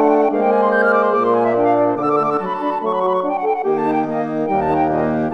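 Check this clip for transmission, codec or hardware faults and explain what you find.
Nothing in this clip stands out as a transmission, codec or hardware problem, so there's nothing to flag here.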